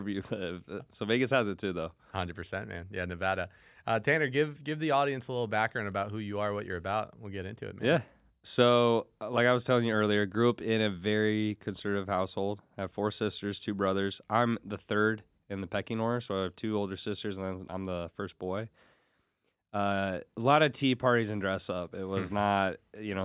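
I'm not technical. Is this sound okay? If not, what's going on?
Yes, no faults to hear.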